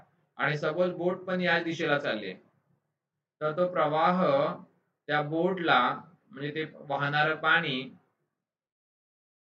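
Nothing technically wrong turns up anywhere in this audio, so there's no fault to point to and no cause to chase down.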